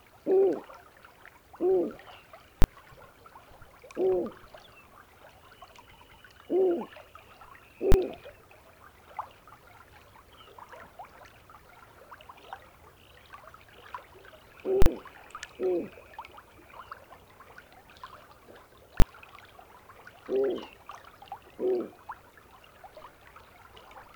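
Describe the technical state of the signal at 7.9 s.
At 7.92 to 7.94 s, invalid numbers at full scale: a 20 ms block pinned flat at one extreme value, heard as one bang, seen as a flat slab and broadband vertical stripe.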